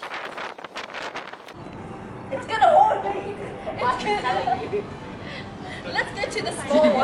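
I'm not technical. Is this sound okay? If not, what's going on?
Yes, nothing in this sound stood out as a problem when listening to it.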